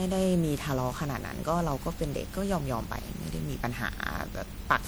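From start to end the speech carries generation loss: a swirly, hollow, smeared texture with blurred consonant attacks, beyond what a single MP3 pass near 96 kbit/s would leave. The likely cause is around fifteen successive MP3 encode-decode cycles, each adding fresh quantisation noise and spectral gaps.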